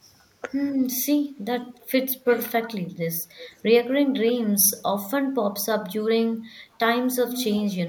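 At 0.42 to 0.48 s the speech briefly dips by about 5 dB, and at 4.06 to 4.34 s, 4.92 to 4.99 s and 6.51 to 6.77 s it sinks again, by about 10, 15 and 15 dB. This is speech suppressed in double talk. It is likely that the far side was talking at the same moment, so the echo canceller mistook this talker for loudspeaker echo and turned the signal down.

Around these dips, a delayed copy of the speech trails the original by 299 ms: a scrap at 1.73 to 1.80 s (about 35 dB down), then clearer repeats at 2.27 to 2.75 s (about 15 dB down) and 3.40 to 3.62 s (about 20 dB down), and the most prominent at 7.27 to 7.56 s, only about 10 dB below the speech. This is echo leak, likely from a loudspeaker whose echo canceller let part of the microphone pickup return.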